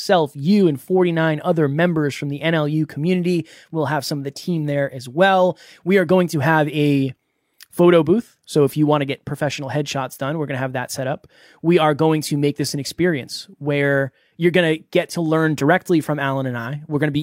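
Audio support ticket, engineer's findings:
No audible faults found in the speech anywhere in the clip, so nothing to chase on this one.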